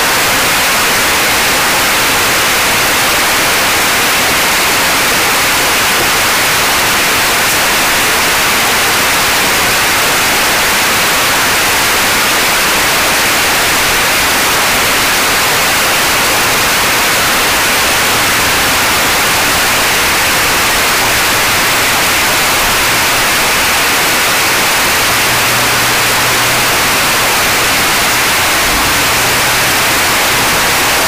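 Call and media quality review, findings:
Signed and unsigned mixed up, whole clip, 0 to 31 s. Constant harsh, very loud distortion; quiet stretches as loud as peaks. Likely sample-format mismatch in decode or playback path, 16-bit data read with wrong signedness. Top bit flipped, so every zero crossing jumps full scale.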